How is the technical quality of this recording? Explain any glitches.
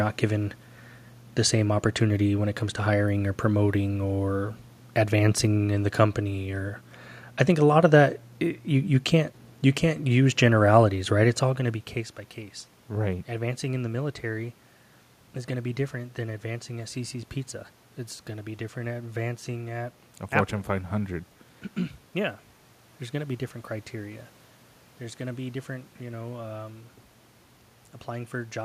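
No system glitches are audible; the steady background is the room's own noise, and the level shift near 11 s is the talker moving relative to the microphone.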